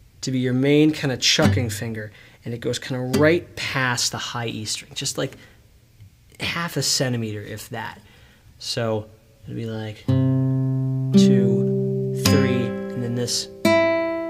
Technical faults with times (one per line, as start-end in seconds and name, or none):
none